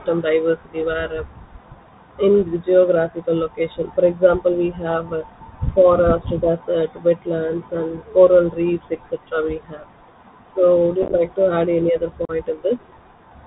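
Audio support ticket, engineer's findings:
Bluetooth CVSD headset codec, whole clip: band capped at 4 kHz, scratchy sibilants, granular hiss under speech. One-bit delta coding at 64 kHz cannot track fast loud highs.

Unconcealed Bluetooth headset packet loss: crackly holes 11.03–11.15 s (about 60 ms gone, longest run 15 ms), and a 38 ms hole at 12.25 s after "any other". Lost packets replaced by silence or an idle pattern.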